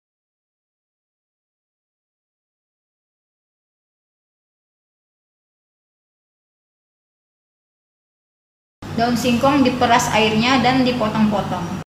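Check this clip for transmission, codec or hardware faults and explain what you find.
No transmission, codec or hardware faults can be heard anywhere in the signal.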